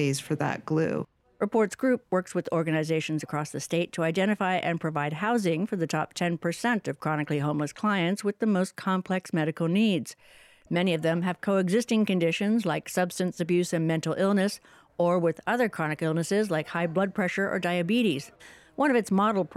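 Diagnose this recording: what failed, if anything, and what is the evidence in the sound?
Nothing here points to a failure at any stage, so there's nothing to trace back to wiring, conversion, buffering, the network or playback.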